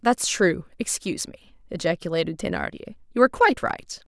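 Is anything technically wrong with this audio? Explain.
No, no technical faults.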